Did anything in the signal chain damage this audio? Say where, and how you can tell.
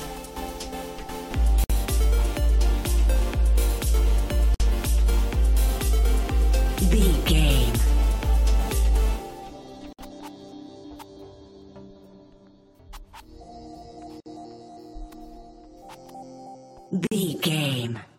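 Yes. The damage happened at the codec stage: the audio was encoded as separate pieces and joined without trimming each run's start-up delay and final-frame padding. That leaves a gap at a join of encoded pieces. Five silences cut into continuous sound at 1.64, 4.54, 9.93, 14.20 and 17.07 s, each lasting 47 to 59 ms. Their edges are smeared by the codec, and the sound resumes exactly where it stopped.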